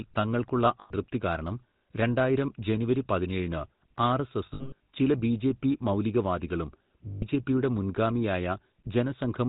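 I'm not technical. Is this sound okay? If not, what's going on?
No, not quite. The whole clip has gone through the old GSM full-rate codec, the phone-network squeeze. It drops everything above 4 kHz and rebuilds the voice from a rough pulse pattern, so this speech sounds buzzy and gravelly all the way through.

There are also lost GSM frames, where the phone system fills gaps by repeating the last good bit, which gives a brief metallic ringing. It happens at 0.8 to 0.92 s, just before "കാരണം രണ്ടായിരം ജനുവരി പതിനേഴിന്". It happens again at 4.46 to 4.86 s, as scattered dropouts just before "ചില ബിജെപി മൗലികവാദികളും". The third is at 7.08 to 7.23 s, right after "ചില ബിജെപി മൗലികവാദികളും".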